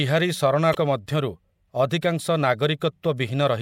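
Damaged data in a compressed stream hits this speech recording at 0.71 to 0.75 s: a short stretch of the encoded file is corrupt, so the decoder misreads those frames, loses sync and hunts for the next valid frame header, producing a brief chirp, squawk, click or short hole.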